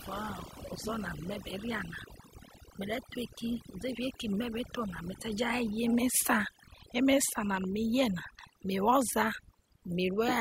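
Overdone noise removal runs through the whole speech clip. The noise reduction was set too strong, so frequency bands near the noise estimate are cut away. The background drops and breaks up into twinkling specks.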